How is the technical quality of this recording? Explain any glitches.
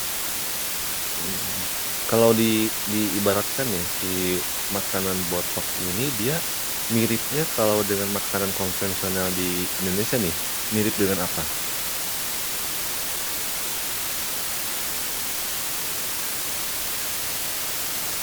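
The technical quality is poor. A fault runs through the whole recording.

Low bit depth with dither is present from start to finish. The hiss suggests about 4 bits, which fits a 4-bit signal. Dither turns rounding error into steady white noise. That noise is roughly as loud as the speech, heard as a constant, even hiss without distortion.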